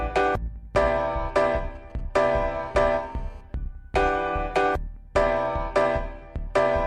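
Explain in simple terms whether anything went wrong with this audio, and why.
From 1.28 to 2.48 s there is a faint, galloping dit-dit-dit of brief buzzy bursts that have nothing to do with the sound being recorded. These are GSM signalling bursts. An older 2G mobile phone close to the equipment was sending short groups of radio pulses, the kind it sends while setting up a call or a text. The audio circuitry picked up those radio pulses and turned them into short bursts of 217 Hz buzz.

Right after that, from 2.55 to 3.41 s, the bursts give way to a continuous, hard, raspy buzz with a harsh, gritty edge. This is GSM phone buzz. Once the nearby phone was in an actual call, it transmitted in a steady stream of bursts, 217 of them every second. The recording circuit picked up each burst, so the pulses merged into one unbroken drone at 217 Hz, a low, nasal hum layered on top of the audio.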